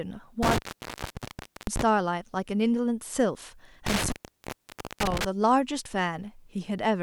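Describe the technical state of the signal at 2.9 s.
At 2.9 s the signal is intact, with no dropout, distortion, or other audible fault at that point.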